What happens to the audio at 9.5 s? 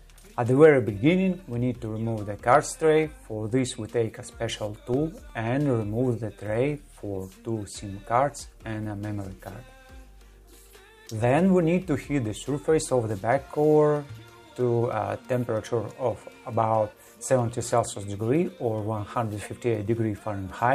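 Nothing goes wrong at 9.5 s; the audio plays through that moment intact, with no dropout, glitch or distortion.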